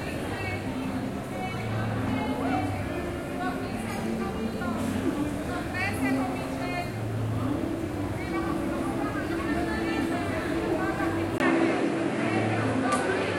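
At 11.38 s the sound drops out for a moment, about 20 ms, and comes back duller and shifted in level by roughly 5 dB, with nothing above 11.4 kHz and a new, faint background noise sitting around 45 dB below the signal. This character holds to the end. It most likely comes from the input switched to a poorer device, a different microphone or headset path with a narrower band, its own tone and its own noise floor.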